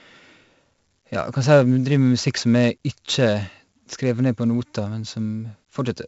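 From start to finish the speech carries 4-bit ADPCM compression damage, and it is heavy. Each sample is coded as a coarse step from a prediction, so a gritty hiss rides on every loud syllable and falls away in pauses, unlike a steady background noise floor. Sharp onsets crackle where the step size lags. Nothing is heard above about 7.7 kHz, which fits a 16 kHz sample rate at a 64 kbps stream and gives the dull top end.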